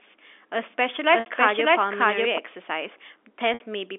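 From 0.64 to 2.38 s, a doubled audio track appears, likely from a second, slower capture path mixing the same signal back in. A full-band copy trails roughly 0.7 s behind at about equal level, starting and stopping abruptly. From 1.20 to 1.26 s and again from 3.54 to 3.60 s, packet loss with pitch repetition occurs: 60 ms gaps, consistent with two lost packets, are bridged by a repeated pitch period. Each time it sounds like a held buzz that fades to silence before the sound cross-fades back, all within the telephone band of 250 Hz to 3.6 kHz.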